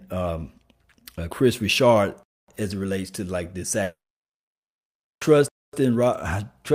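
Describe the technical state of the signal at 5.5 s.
A gap between chunks sits across 5.48 to 5.73 s: the audio arrives in 3-second chunks, and here a join is filled with about 250 ms of silence. Nothing is lost, but the speech breaks off in a short hole before resuming.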